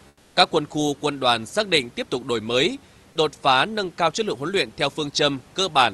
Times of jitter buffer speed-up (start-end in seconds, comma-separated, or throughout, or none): none